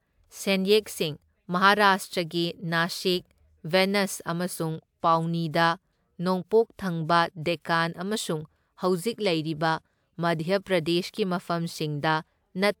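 Speech with no audible faults.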